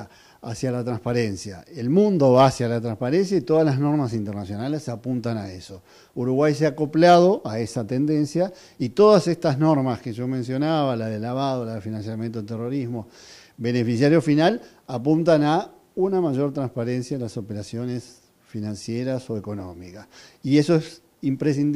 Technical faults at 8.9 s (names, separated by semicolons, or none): none